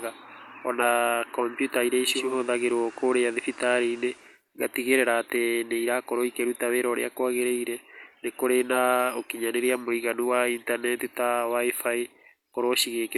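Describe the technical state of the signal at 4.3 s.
Faint hiss: digital radio blending to analogue, 2.05 to 4.43 s, as the receiver leans on FM until "ngatigĩrĩra atĩ nĩ ĩraruta".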